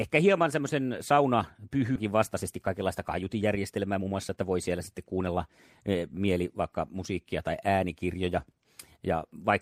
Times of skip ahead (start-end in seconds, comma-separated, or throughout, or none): 1.95-1.97